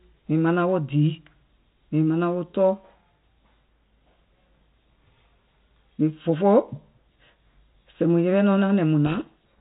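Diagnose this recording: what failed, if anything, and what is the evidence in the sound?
The codec stage failed: a codec payload misread from 9.06 s to the end at 9.61 s buries the speech in harsh distortion. The decoder of the 32 kbit/s G.726 link, with its light coding hiss, is reading each code word with its bits in the wrong order, producing wrong prediction steps.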